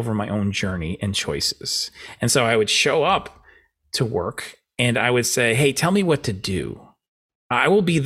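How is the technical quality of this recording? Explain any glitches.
The recording has two brief skips in the speech. Audio missing between chunks occurs at 2.30 s and 4.79 s. A few milliseconds likely drop out where one 2.5 s block closes and the next opens, heard as tiny abrupt jumps.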